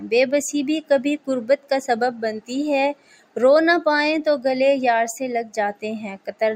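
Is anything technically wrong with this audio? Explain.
Yes. Throughout, the sound pumps and thins, its level swinging by around 10 dB as sustained parts sink: a noise suppressor meant for speech was applied to these sounds, treating steady content as noise.

From 2.94 to 3.36 s and from 6.18 to 6.41 s, the sound dips by about 12 dB for a fraction of a second, because the suppressor mistook it for noise.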